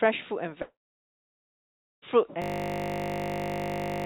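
At 0.62 s the sound breaks off, and the last moment smears into a fading buzzy tail before about 1.3 s of near silence. Audio resumes at 2.04 s with roughly 1.4 s simply gone. The likely cause is a long network dropout: no packets arrived, the receiver stretched the final sound briefly, then gave up until data returned.

From 2.42 s to the end, the audio turns into a steady 50 Hz buzz, one 20 ms fragment repeating about 80 times. This is a system hang loop: the computer or driver froze while the sound hardware kept replaying the same short buffer. Throughout, the call path leaves nothing above 4 kHz.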